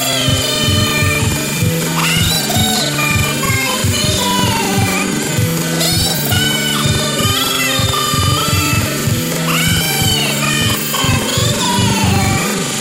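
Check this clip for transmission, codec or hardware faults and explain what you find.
One fault runs throughout: planar audio read as interleaved. Each 85 ms block, consistent with 4096-sample blocks, plays twice at double speed, so the sound is an octave high with an 11.7 Hz flutter.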